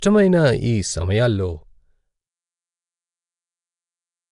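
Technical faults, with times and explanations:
Throughout, Nellymoser compression: a rough, hissy halo and smeared, underwater blur sit on the speech, with nothing above 10.6 kHz, which fits roughly 44 kbps. Unlike plain low-pass dulling, starved bands are refilled with noise, the likely source of that grain.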